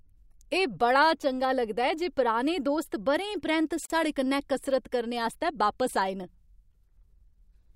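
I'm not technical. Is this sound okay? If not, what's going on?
No. The speech was encoded in separate pieces and joined without trimming the extra silence each piece carries. This causes a gap at a join of encoded pieces: a 45-millisecond silence from 3.86 to 3.90 seconds, after which the speech resumes exactly where it stopped.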